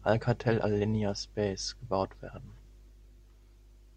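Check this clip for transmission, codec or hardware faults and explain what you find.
No transmission, codec or hardware faults turn up when checking this clip.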